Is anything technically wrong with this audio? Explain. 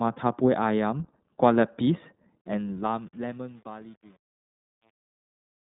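Yes, two things. The whole clip has gone through the iLBC codec. Nothing gets above about 3.8 kHz, and the band sits around 150 Hz to 3.7 kHz. Each 20 ms frame is coded on its own, so the speech comes out clear but plainly rough and a bit synthetic, which fits the 15.2 kbps mode.

There's also truncation distortion on a fade, starting at 2.41 s and running to the end at 5.66 s. The fade-out starts around 2.4 s, and the gain stage has too few bits and no dither, which points to roughly 9 bits. It's worst from 3.0 s on, where the quiet tail turns gritty.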